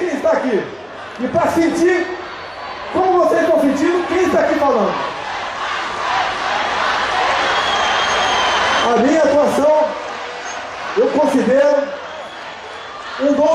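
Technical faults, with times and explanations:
Nothing stood out on listening; no technical problems could be heard anywhere in the clip.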